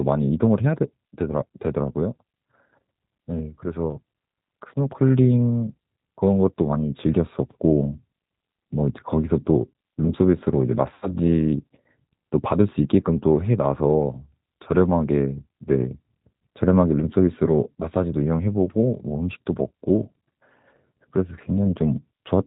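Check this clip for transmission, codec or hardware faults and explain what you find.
Two faults are audible: low-bitrate codec damage throughout, and one concealed packet loss near the middle.

The G.729 codec colours the whole clip. At 8 kbit/s it rebuilds speech from a modelled vocal tract and a few pulses per frame. Nothing above 4 kHz survives. The speech sounds dull, slightly rough and synthetic.

VoIP packet loss concealed by the speech codec occurs from 10.94 to 11.11 s. About 80 ms of audio went missing, which fits eight lost 10 ms frames. The decoder stretched its last pitch and filter state, fading the gain. This gives a brief smeared patch, a buzzy tone or coloured noise, that recovers over the following tens of milliseconds.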